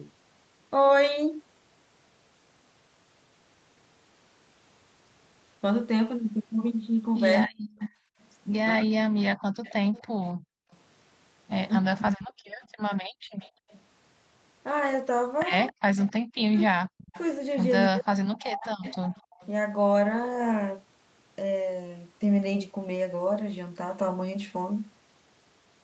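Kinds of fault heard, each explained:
Speech suppressed in double talk: From 7.47 to 12.68 s, and again from 15.72 to 18.85 s, the speech sinks by roughly 40 dB in short pieces. These add up to about a second in the first stretch and about one and a half seconds in the second. The likely cause is an echo canceller that, with both sides talking at once, turned down its own talker along with the loudspeaker echo. On a waveform the envelope shows abrupt notches. A spectrogram shows those columns thinning out.
Echo leak: Between 7.79 and 19.46 s a faint second copy of the speech trails the original by 273 ms, sitting roughly 20 dB below it. This is likely sound from a loudspeaker that the far end's microphone picked up and its echo canceller failed to remove fully, so it was sent back. On a spectrogram the harmonic pattern reappears, dimmer and shifted about 0.27 s to the right. On a waveform it shows as low bursts trailing the speech.
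Background gated by the echo canceller: Between 8.04 and 13.69 s the room sound drops by about 40 dB in brief holes totalling around a second, then comes back. This happens because the echo canceller clamped the microphone hard while the loudspeaker was playing and released it afterwards. A spectrogram shows the noise floor going dark in narrow vertical bands. On a waveform these appear as deep dips where the room sound should be.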